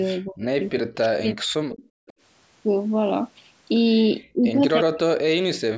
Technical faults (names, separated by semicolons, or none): speech suppressed in double talk; echo leak